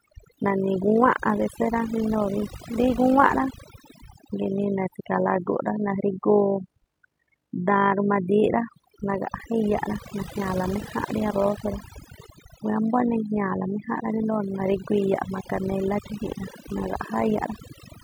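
From start to finish the speech carries overdone noise removal: bands near the estimated noise floor are cut away, leaving a reduced background that breaks up into twinkling specks, unlike plain low-pass dullness. Throughout there is also overlap-add ripple, where mismatched frame overlaps make the level pulse by about 6 dB around 50 times a second. It sounds like a rough flutter rather than slow tremolo or gating.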